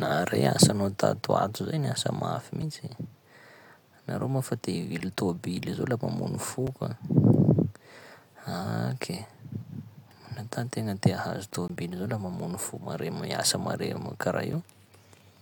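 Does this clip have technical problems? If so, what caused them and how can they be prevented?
Yes. Blocks of digital silence occur at 2.62, 5.0, 6.67, 11.68 and 14.53 s. At each point the speech cuts out and returns with no fade. The first three last 5.8 ms and sound like ticks or dips. Their identical length fits a 256-sample buffer that went unfilled. The 18.8 ms gap at 11.68 s is long enough to be a brief hole, and the 3 ms gap at 14.53 s is a tick or dip. To prevent these dropouts, give the audio thread more headroom with larger buffers or a lighter processing load, and guard the calculations against invalid values.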